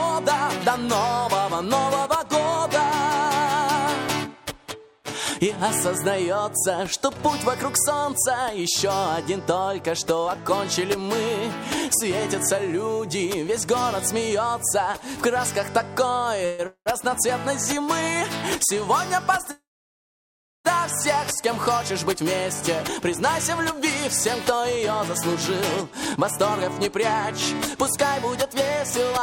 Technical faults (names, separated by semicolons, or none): call audio freeze; jitter buffer speed-up